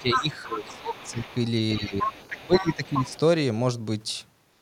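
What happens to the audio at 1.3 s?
A faint second voice slips in under the speech from 1.24 to 1.35 s, well below the talker, around 25 dB down. This is the other side's voice leaking through, likely because the echo canceller did not fully remove the loudspeaker playback from the microphone.

Just before that, the talker's speech sits ducked from the start to 1.27 s, dropping by as much as about 20 dB. This is speech suppressed in double talk, likely from the canceller turning down both voices when it could not separate them.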